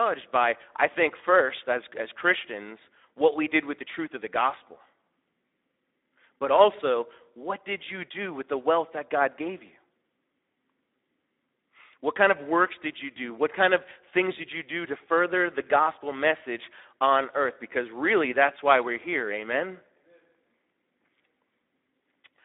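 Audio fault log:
Throughout: Speex codec. The speech is narrowed to a telephone band of about 250 Hz to 3.7 kHz, with nothing above 3.8 kHz. Too few bits reach the excitation, so voicing sounds grainy and hoarse. The damage fits a setting near 11 kbps.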